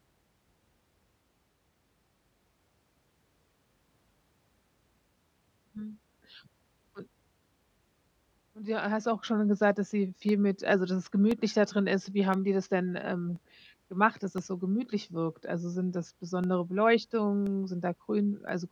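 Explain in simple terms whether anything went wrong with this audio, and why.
Periodic USB or driver dropouts: the audio path stalled every 1.024 seconds, silencing about a millisecond each time, so the speech ticks regularly from 0.06 to 18.49 seconds.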